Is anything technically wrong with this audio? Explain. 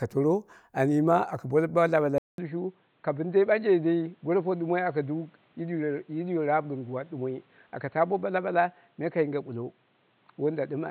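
Yes. From 2.18 s, after a 200 ms gap, the speech goes dull and somewhat quieter, with nothing above 4.3 kHz. The input likely switched to a poorer device, bringing its own faint noise.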